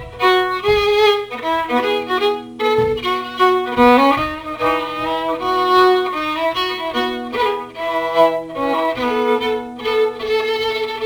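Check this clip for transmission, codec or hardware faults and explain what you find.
One hardware fault runs through the whole clip: sample clock jitter. A hiss and graininess ride on the sound, growing with louder and brighter passages and vanishing in silence. The converter's clock wanders by a few microseconds, so samples land early or late, leaving error roughly 30 dB below the signal.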